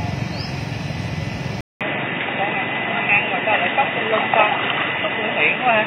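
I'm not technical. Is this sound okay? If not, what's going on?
No. At 1.61 s the input likely switched to a poorer device. After a brief gap, the sound turns dull and boxy, losing everything above 3.8 kHz.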